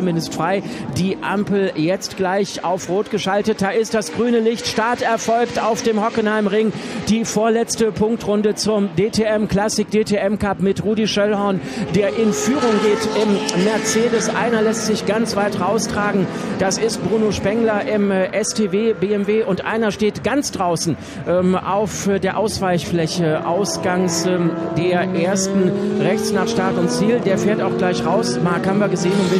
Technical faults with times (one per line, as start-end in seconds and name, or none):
none